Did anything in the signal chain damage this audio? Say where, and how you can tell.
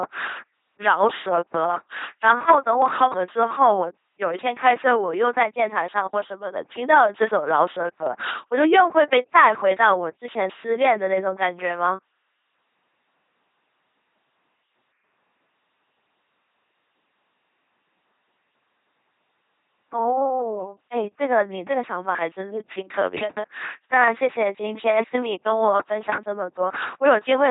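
Yes, the codec stage wrecked it. The speech buzzes mechanically throughout, robot-like, with nothing above 3.8 kHz, which points to an LPC-10 vocoder at around 2.4 kbit/s. Each moment gets rebuilt from a simple filter fed either a pulse buzz or noise, never both.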